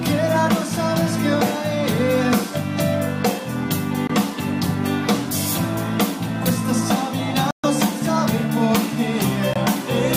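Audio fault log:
4.07–4.11 s, 7.51–7.65 s, 9.54–9.57 s, Bluetooth dropout: the sound falls silent for 21 ms, 128 ms and 21 ms, then resumes further along as though it had kept playing, likely from late packets being discarded before reaching the headphones.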